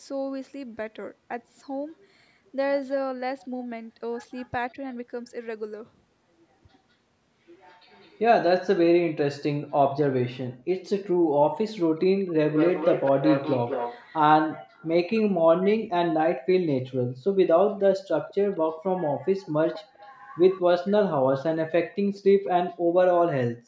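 Echo leak appears in this speech at 4.32–4.48, 7.9–8.2, 12.51–14.17, 14.72–15.22, 18.28–18.57 and 19.74–20.61 s: a faint copy of the voice trails it by 201 ms, mostly far below the speech but much stronger, about 10 dB down, at 12.51–14.17 s. The likely cause is an echo canceller on a loudspeaker end letting its microphone pickup return. Speech suppressed in double talk occurs at 4.73–4.77 s, where the voice dips by a few decibels for about 40 ms, likely because the canceller could not separate its own talker from the loudspeaker echo while both sides spoke and turned both down.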